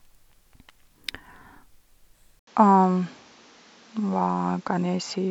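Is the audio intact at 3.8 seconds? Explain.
No. From 2.39 s to the end, the speech sounds like the input likely switched to a poorer device: an 80 ms gap, then nothing above 7.6 kHz, a duller tone, a level shift of a few dB, and new background noise roughly 30 dB down.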